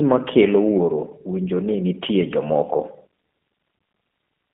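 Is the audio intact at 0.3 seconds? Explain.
No. At 0.3 s, as through the whole clip, G.729 codec damage is plainly audible. The speech is rebuilt from a vocal tract filter, pitch predictor and sparse pulses, consistent with an 8 kbit/s G.729A stream. The band sits near 200 Hz to 3.5 kHz, sounding rough and synthetic.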